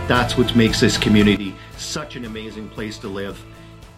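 A sudden gain jump occurs at 1.37 s: the level of the audio falls abruptly by about 12 dB and stays at that lower level until the end of the clip. The background noise drops by the same amount at the same instant, which shows the whole signal was scaled at once rather than the source getting quieter. The likely cause is a digital gain change applied from one sample to the next with no ramp, such as a level setting or bit shift.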